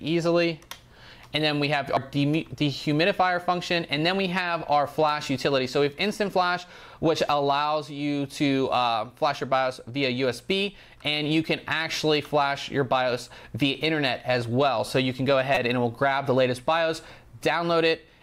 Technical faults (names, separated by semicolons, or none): damaged data in a compressed stream